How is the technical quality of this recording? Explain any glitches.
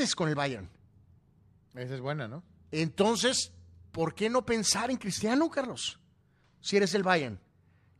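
No glitches can be heard anywhere in this speech recording. Nothing in the audio calls for explanation.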